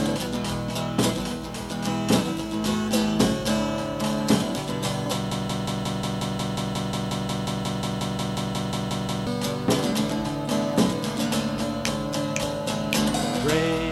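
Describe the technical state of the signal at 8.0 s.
At 8.0 s a broken-record loop is in progress, spanning 5.31 to 9.27 s. One 180 ms fragment repeats back to back 22 times, likely because the player or stream stalled and kept resending its last buffer. The audio meant for that span is lost.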